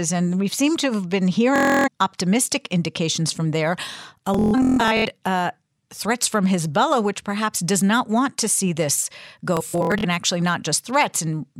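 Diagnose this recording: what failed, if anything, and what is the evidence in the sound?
Bluetooth stutter: wireless packets on the playback link arrived late or were lost, so the receiver replayed its last buffer. Machine-gun repeats follow "seem to have been" at 1.56–1.88 s, "optimistic indications from there" at 4.34–5.05 s, and "to see this go" at 9.57–10.05 s. The speech then jumps ahead.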